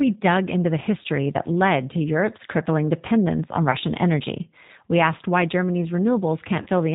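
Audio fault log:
throughout: G.729 codec. The speech is squeezed to about 8 kbit/s and rebuilt from a vocal tract filter, a pitch predictor and a few pulses per 10 ms frame. Nothing above 4 kHz survives, so the voice sounds muffled, slightly rough and plainly synthetic.
3.71–3.77 s and 6.62–6.68 s: VoIP packet loss concealed by the speech codec. About 20 ms of audio was lost at the first point and 40 ms at the second, which fits one and then two dropped packets. The decoder stretched its last pitch and filter at falling gain, producing brief fading stretches of tone or noise and a weak, distorted recovery.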